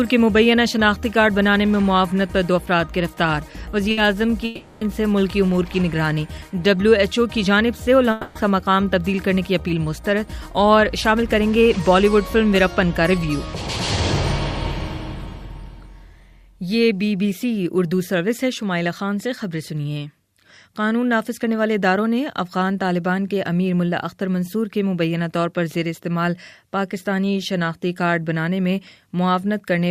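At 3.91 s there's a burst of packet loss lasting about 60 ms. The receiver carries the last bit of sound forward and fades it, giving a short smeared buzz or hiss, and when the audio picks up again at 4.00 s about 60 ms has been skipped.

From 4.45 to 4.84 s the sound turns into a held, gradually fading buzz or hiss for about 360 ms, never reaching silence, then jumps ahead. It happens again from 8.11 to 8.38 s, for about 240 ms. Both are likely a long network dropout with concealment filling the gap.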